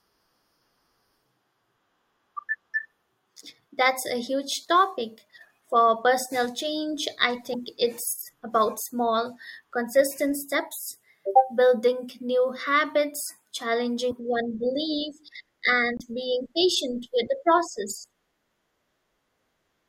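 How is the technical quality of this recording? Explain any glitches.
The speech carries three brief glitches, each likely from a broken MP3 bit reservoir: at 7.53 to 7.55 s, 14.10 to 14.12 s and 15.97 to 16.01 s. After a cut in the stream, the next frame reads borrowed bits from the wrong bytes, so the audio skips ahead with a short garbled blip, roughly one to two 24 ms frames long. On a spectrogram each shows as a thin vertical smear or gap, and on the waveform as an abrupt discontinuity.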